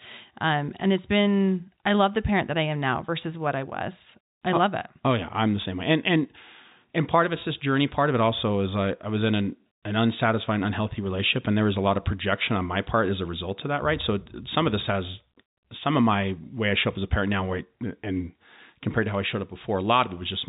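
The speech arrives through G.711 telephone coding, which fits 64 kbps mu-law, so the band stops at about 3.8 kHz and the only other trace is the faint, level-following quantisation hiss of that coding, with no fault anywhere in the signal.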